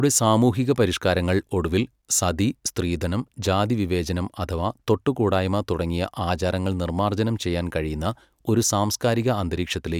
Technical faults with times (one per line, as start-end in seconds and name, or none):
none